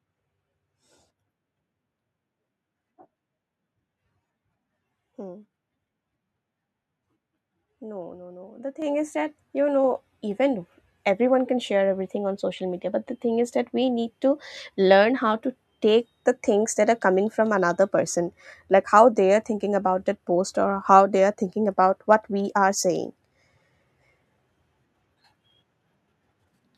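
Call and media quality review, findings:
Microphone volume stepped up at 8.82 s, right before "is that you". Voice and room noise jump together by about 8 dB in one hit, no ramp. Probable component is the client's automatic mic gain control, which judged the input too quiet and bumped the device input level.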